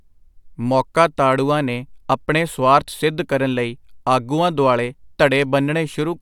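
Listening closely to the speech, nothing stood out as a technical problem at any point.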